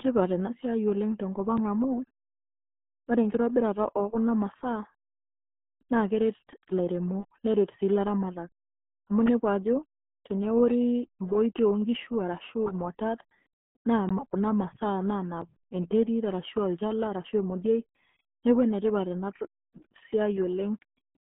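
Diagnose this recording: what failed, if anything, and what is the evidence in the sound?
Codec stage: the whole speech clip carries heavy RealAudio 14.4 codec damage. Nothing passes above 3.8 kHz, and there is almost nothing below 150 Hz. Plain telephone band-limiting would sound clean; here the speech is gargly and muffled throughout, which fits a coder squeezing speech to about 8 kbit/s.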